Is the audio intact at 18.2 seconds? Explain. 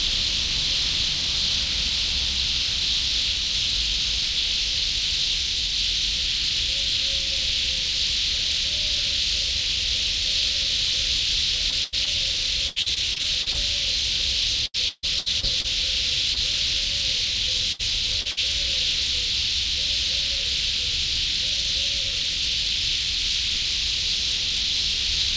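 No. Repeated packet loss runs from 17.72 to 18.39 s: three short gaps, the longest 69 ms, are patched by stretching the previous sound, concealing about a quarter of that stretch and giving a choppy, robotic texture rather than the single clean hole of one dropout.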